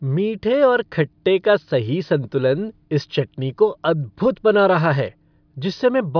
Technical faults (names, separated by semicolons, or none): none